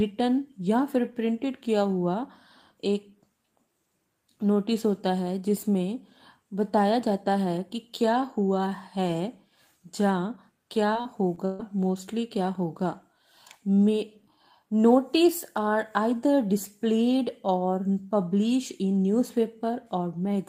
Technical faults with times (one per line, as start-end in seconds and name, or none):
10.93-11.61 repeated packet loss (robotic sound)